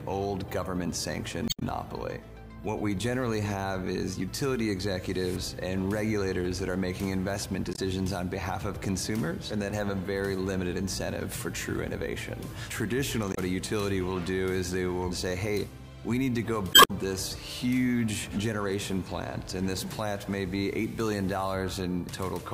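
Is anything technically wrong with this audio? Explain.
Yes. There's damaged data in a compressed stream, four times: 1.45–1.63 s, 7.72–7.79 s, 13.31–13.38 s and 16.71–16.91 s. Corrupted bytes throw the decoder off, so it misreads frames and hunts for the next header, giving short chirps, squawks, clicks or holes.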